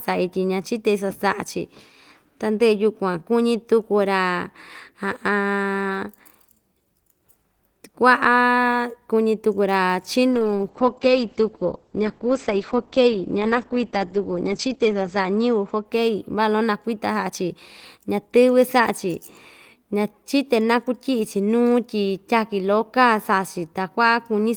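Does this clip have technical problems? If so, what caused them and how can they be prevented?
Yes. A call bitrate drop runs from 10.32 to 16.57 s. The sound turns muffled and rough, with highs cut above 8 kHz, which fits the encoder falling to about 9 kbps. Prevent it with a steadier network connection.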